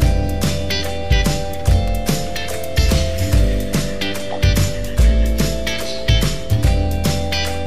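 A sharp snap sits on top of the sound at 1.88 s, brief, peaking near -10 dBFS. This is an electrical switching spike, likely from a nearby switch, motor or static discharge arcing and coupling into the audio line.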